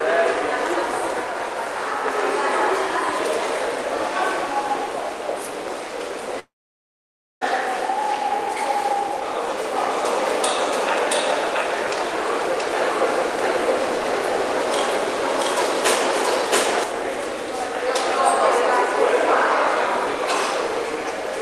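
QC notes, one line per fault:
6.39–7.43 s, long network dropout: about 1.02 s of audio lost; the last sound smears into a fading buzz or hiss, then about 0.93 s of silence, likely a network outage.
9.76–16.84 s, doubled audio track: an equally loud, dry full-band copy trails about 0.7 s behind, starting and stopping abruptly, likely from a second, slower capture path.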